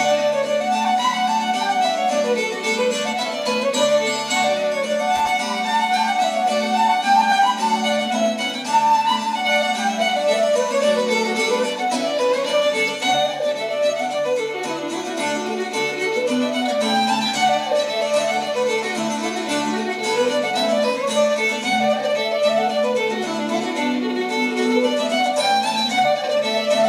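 At 5.16 s a loose connector crackle breaks out and lasts about 0.16 s, to 5.31 s. A worn or dirty contact is making and breaking intermittently, chopping the signal and adding pops wherever DC sits on the line, so it comes across as a short, irregular scratchy burst.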